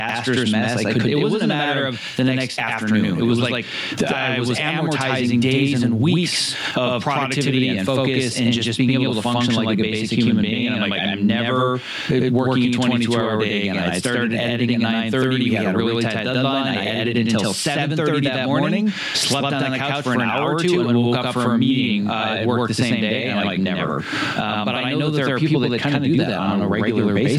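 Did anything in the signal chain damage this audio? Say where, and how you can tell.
Yes, two faults run through the whole clip. Every syllable of the speech is followed by a same-level repeat about 92.9 ms later, heard as a doubling or a single slap echo. That is channel delay (doubling) at the driver or buffer stage: one channel of the capture arrived late by a full buffer, which fits a 4096-sample buffer, and the two channels were then summed to mono, so both copies sound at equal strength.

The level also breathes, with a swing of around 10 dB. The room noise sits about 42 dB below the speech, and loud and quiet syllables come out squashed toward the same level. This is gain pumping, likely caused by input gain set far too high for the microphone, with a fast limiter or compressor in the capture or call-processing chain pulling the level down on every loud sound.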